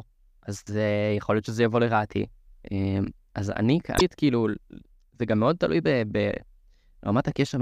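At 3.96 to 4.01 s, damaged data in the compressed stream throws the decoder off sync while it hunts for the next frame, leaving a brief glitch in the speech.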